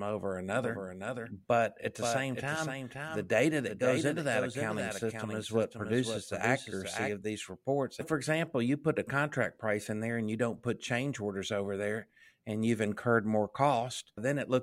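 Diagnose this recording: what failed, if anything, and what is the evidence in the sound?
Doubled audio track, 0.64 to 7.12 s: a dry, quieter copy trails half a second behind, stopping abruptly, likely from a second capture path.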